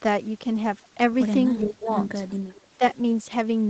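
Speech suppressed in double talk from 1.59 to 1.88 s: the level dips by as much as about 20 dB, broken into pieces totalling around a fifth of a second. The likely cause is an echo canceller that, with both sides talking at once, could not separate this talker from loudspeaker echo and attenuated everything.

Echo leak from 2.29 to 2.67 s: a faint copy of the speech, roughly 30 dB below it, trails the original by 391 ms. This is likely residual loudspeaker pickup on the far end that its echo canceller failed to remove and sent back.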